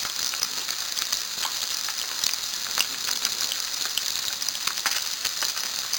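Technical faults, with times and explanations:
Throughout, imaging from sample-and-hold upsampling: samples were repeated without smoothing, which fits a source rate near 11 kHz, leaving mirrored copies between 5.5 and 11 kHz about 4 dB down. Unlike steady hiss, this metallic fizz rises and falls with the sound.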